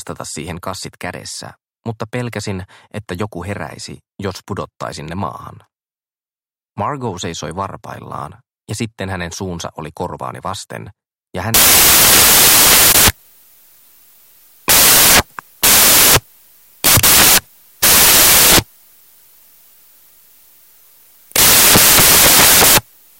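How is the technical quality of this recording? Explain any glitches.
The second half is badly damaged. From 11.54 s to the end, samples built from the wrong bytes: the reader misassembles each sample, so fast-changing low bits dominate, producing loud, harsh broadband noise, close to white on loud sounds.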